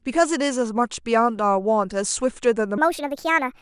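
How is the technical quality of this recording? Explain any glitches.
There's one clear glitch, right at the tail. From 2.78 s to the end, a wrong sample rate kicks in. The samples play back faster than they were captured, with no conversion, which fits 22 kHz audio being run at 32 kHz. The speech jumps to 1.45 times speed and about 6.5 semitones higher, sounding squeaky and rushed.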